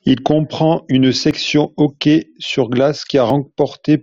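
At 1.31 s, between "comprend une" and "hockey sur", and again at 3.30 s, the speech gives a small click or skip. Both come from an overlap between stream segments. Two segments about 2 s long carried overlapping time stamps, so a few milliseconds that were never duplicated got trimmed, and the spacing of the two events matches that segment length. A waveform would show an abrupt jump in sample values at each spot. A spectrogram would show a thin vertical broadband line.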